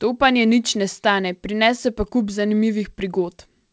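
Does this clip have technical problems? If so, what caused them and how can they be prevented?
No, this clip has no technical problems, so there is nothing to prevent.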